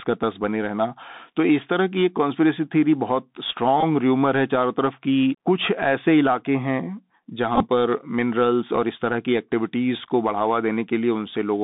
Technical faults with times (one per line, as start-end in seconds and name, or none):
0.00-11.64 Bluetooth CVSD headset codec
3.81-3.83 Bluetooth headset packet repeated
7.56-7.68 Bluetooth headset packet repeated